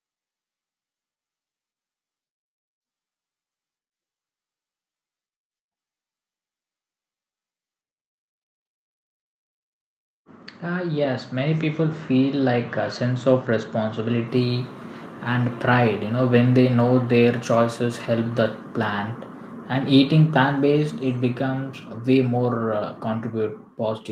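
A speech recording in which, from 10.63 s to 14.78 s, the voice and the room noise behind it swell together, climbing by about 8 dB over roughly four seconds instead of jumping. This is automatic gain rising: the gain control judged the input too quiet and steadily turned its gain up, lifting everything in the signal at once. The audio also carries the coding texture of a call codec, with the top end stopping near 8 kHz, which fits Opus at a modest bitrate.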